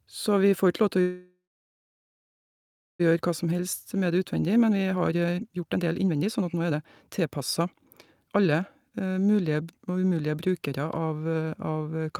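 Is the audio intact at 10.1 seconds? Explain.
No. At 10.1 s the speech is inside a jitter buffer speed-up running from 8.25 to 10.29 s. After late packets arrived in a burst, the receiver trimmed its backlog by cutting out short pitch-period slices again and again, about half a second in all. The speech plays at 125% speed with its pitch unchanged and sounds hurried. On a spectrogram the harmonics hold their spacing while syllables look compressed in time, and the waveform shows shortened periodic stretches.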